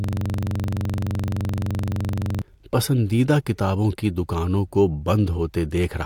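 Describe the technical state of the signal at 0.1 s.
At 0.1 s the audio is a rapid, buzzy stutter: a 42.67 ms fragment repeating about 23.4 times per second, already under way when the clip starts and running to 2.42 s. This is a system hang loop. The system froze while the playback hardware kept cycling one ring buffer, which fits a 2048-sample buffer.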